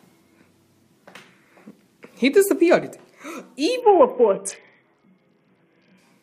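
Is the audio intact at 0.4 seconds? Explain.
Yes, the audio is intact at 0.4 seconds, with no dropout, click, distortion or other fault at that moment.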